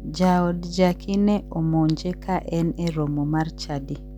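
From start to finish, mains hum at 50 Hz runs beneath the speech at about 15 dB below it. Power-line current is leaking into the signal path, likely through a ground loop, giving a steady low buzz. A spectrogram shows an unbroken horizontal line at 50 Hz with fainter harmonics above it.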